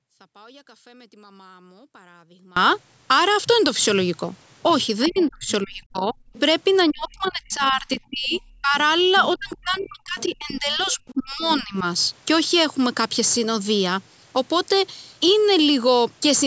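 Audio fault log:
0 to 2.57 s, audio dropout to a faint residue: The wanted signal is likely lost somewhere upstream while the path stays live. The clip opens mid-gap, with only faint sound about 30 dB below normal level, then speech returns abruptly at 2.57 s, not as a fade.
5.07 to 5.51 s, 6.33 to 6.40 s, 7.26 to 7.30 s, 7.94 to 10.24 s and 10.8 to 11.54 s, other side's voice leaking through: The echo canceller likely fails to remove the far-end loudspeaker sound from the microphone. A second voice comes through, in brief scraps or longer stretches, about 15 to 25 dB below the main speech.
5.08 to 6.16 s, 6.9 to 8.75 s and 9.36 to 11.84 s, speech suppressed in double talk: With both sides talking, the echo canceller likely cannot separate the talker from the echo and turns everything down. The speech dips by up to about 35, 25 and 30 dB, for roughly one, one and a half and two seconds of affected sound.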